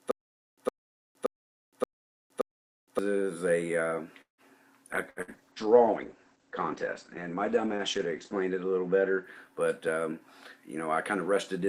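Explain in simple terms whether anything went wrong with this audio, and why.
Several things went wrong, one after another.

From the very start to 2.99 s there is a stutter with silent gaps. A short 110 ms snippet plays, then about 0.47 s of dead silence follows, and this repeats five times at a steady beat. The likely cause is a stalled player replaying its last fragment. The exact, evenly spaced repeats with pure silence set it apart from a freeze, and the audio meant for that stretch is gone.

At 4.21–4.41 s there is a call audio freeze. The last sound is stretched for about 0.17 s and fades, leaving roughly 0.13 s of silence. Then the audio carries on exactly where it stopped. The likely cause is delayed network packets. Unlike a stutter, nothing repeats and nothing is lost; the sound is just held up.

From 4.95 s to 11.26 s a call bitrate drop makes the sound rough and muffled. The connection forced much coarser encoding, and everything above 8 kHz disappears, where normally sound reaches up to 20 kHz. 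It sounds worst for about 3.3 s. This is a lasting loss of quality rather than brief breaks.

At 5.10 s and 5.22 s come two bursts of packet loss. Each time about 60 ms of audio is missing, covered by a short fading buzz or hiss. Unlike the freeze, the audio then jumps ahead, so that stretch is skipped.

At 9.88–10.20 s and 10.75–11.67 s there are jitter buffer speed-ups. The audio plays about 11% and then 6% faster at the same pitch, which sounds hurried. Roughly 50 ms and 70 ms are trimmed away to cut delay. Unlike the other faults, nothing stops or gaps.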